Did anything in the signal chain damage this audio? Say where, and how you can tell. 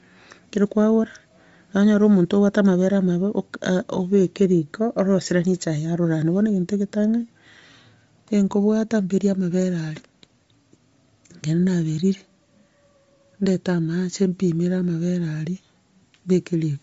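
Yes. Bluetooth LC3 compression runs through the whole speech clip, so the damage sits at the codec stage. The audio stops dead at about 7.7 kHz, and the upper band carries a breathy, grainy hiss in place of real detail. That points to a transform codec that has discarded the top of the spectrum and filled it with noise. The likely cause is an LE Audio link at a low setting, consistent with roughly 32 kbps in 10 ms frames.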